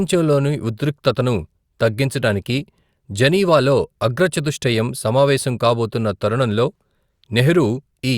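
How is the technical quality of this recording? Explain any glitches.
No glitches or technical faults are audible anywhere in the recording.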